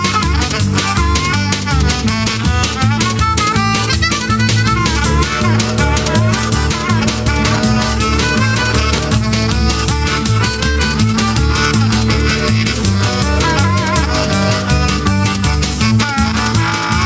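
The gain swings by about 5 dB, so loud and soft parts sit squashed close together; this gain pumping is likely from gain set far too high, with a fast limiter pulling it down on each peak, while call microphone processing leaves nothing above 8 kHz.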